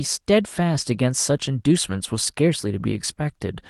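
Nothing goes wrong anywhere in this bit of speech; it just comes across as a normal call over Opus, with the top end rolling off around 12 kHz as that setup would give it.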